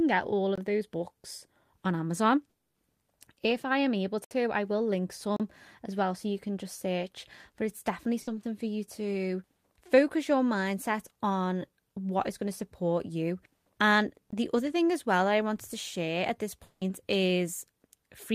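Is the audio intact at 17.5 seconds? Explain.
Yes, the speech at 17.5 seconds comes through intact, with no dropout, click, distortion or other fault at that moment.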